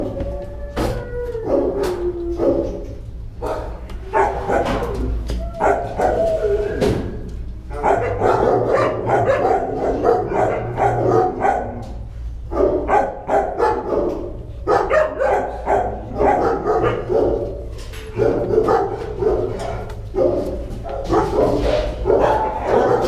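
Nothing here goes wrong technically, so there's no fault to point to at any moment in the recording.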